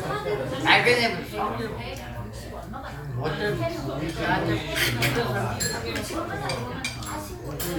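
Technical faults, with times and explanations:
No technical faults can be heard in this audio.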